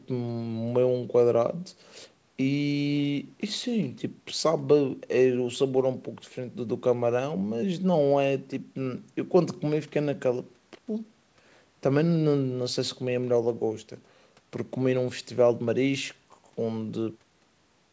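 Nothing stood out on listening to this speech recording, which carries the usual call-path band limit with nothing above 8 kHz and ends in a smooth fade-out from about 17 s to 17.19 s.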